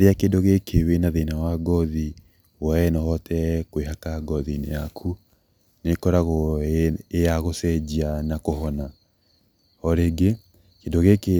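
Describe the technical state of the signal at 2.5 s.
The speech at 2.5 s is intact, with nothing audible there to indicate any technical fault.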